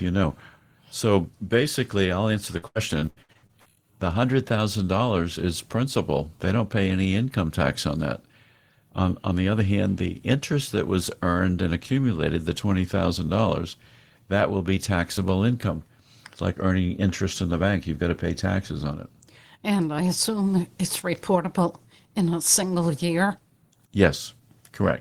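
From 2.57 to 3.67 s the speech breaks up with repeated packet loss, giving a robotic sound. Ten short holes, the longest about 73 ms, are each patched by stretching the preceding sound, so roughly 41% of that second is concealment rather than real audio. The repeated patching gives a choppy sound with pieces missing. Unlike a single dropout, the damage recurs in quick succession, and unlike plain silence gaps, the holes are filled rather than left empty.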